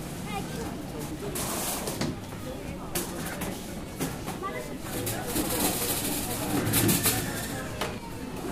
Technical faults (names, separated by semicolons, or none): dropped buffer (overrun)